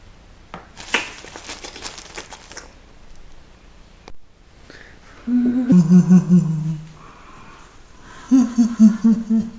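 From 5.72 s to the end at 9.58 s, a wrong sample rate slows the audio to about two-thirds speed and drops pitch 7 semitones, which fits 24 kHz material played at 16 kHz.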